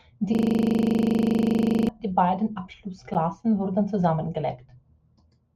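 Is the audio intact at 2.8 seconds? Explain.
Yes, at 2.8 seconds the speech runs on without any audible dropout, click, glitch or other fault.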